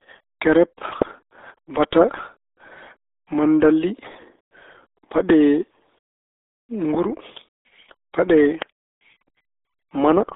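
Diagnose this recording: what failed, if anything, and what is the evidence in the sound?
Codec stage: the speech is muffled and gargly throughout, with nothing above 3.8 kHz, which fits the RealAudio 14.4 codec squeezing the audio to about 8 kbit/s.

Analogue wiring: a single loud pop from 8.62 to 8.64 s, roughly 20 dB above the speech, with the speech continuing underneath, likely a plug or switch transient.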